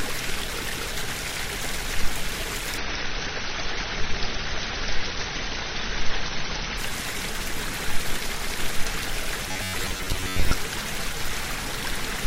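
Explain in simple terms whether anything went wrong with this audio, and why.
Two things went wrong. From 2.78 to 6.78 s the connection slowed and the adaptive stream switched to a lower-bitrate version. The sound suddenly gets rougher from added coding artefacts, but without any gap.

From 9.49 to 10.53 s there is robotic sound from repeated short buffers. The player likely ran short of fresh audio and kept replaying roughly 10 ms snippets, covering about half the time. This puts a steady, metallic 94 Hz buzz over the sound.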